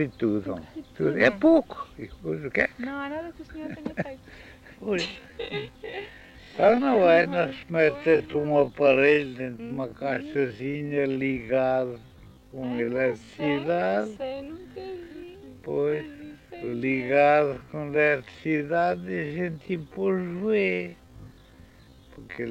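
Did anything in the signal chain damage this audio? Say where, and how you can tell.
Yes. From 5.04 s to the end the sound abruptly slows to half speed, pitch unchanged. This is a time-stretched section, likely software stretching by repeating short grains. Spectrogram harmonics stay put while events last twice as long. The waveform shows repeating near-identical segments.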